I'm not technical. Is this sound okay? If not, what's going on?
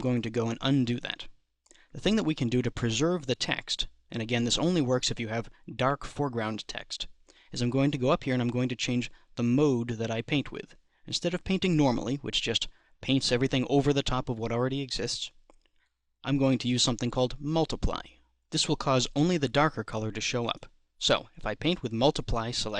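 Yes, it's fine; nothing here needs fixing.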